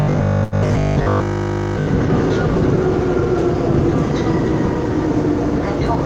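From 0.02 to 1.88 s the sound takes on a rigid, metallic robotic quality from repeated short buffers, a steady 50 Hz buzz laid over the material while its broad shape still comes through. The likely cause is that new audio was arriving too slowly, so playback kept looping the most recent 20 ms block to fill the gaps. Most of that stretch is repeated audio rather than fresh signal, and that fixed 20 ms period is what imposes the constant 50 Hz pitch. Inside the same span, between 0.43 and 0.55 s, there is a short stall from a late packet. A packet missed its playout time, the jitter buffer ran dry, and the receiver held the last sound for 84 ms until the data turned up. Playback then picked up from exactly where it stopped, so nothing is lost, but that moment is audibly stretched and everything after it plays 84 ms later than before.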